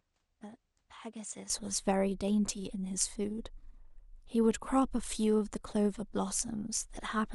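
Input switched to a poorer device, 0.0 to 1.5 s: the opening speech is noticeably quieter, roughly 10 dB down, with nothing above 9.4 kHz and a faint noise floor well below it. The likely cause is a narrower-band input in use before the system switched back, with no gap at the change.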